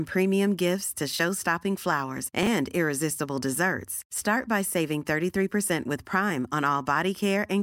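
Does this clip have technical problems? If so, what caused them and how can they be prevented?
Yes: chunks out of order from 2.43 to 2.47 s, where one 10 ms chunk plays three chunks late, producing a jumbled instant with three hard joins. Preventing it means sequencing chunks by timestamp or sequence number in the jitter or write buffer before playback.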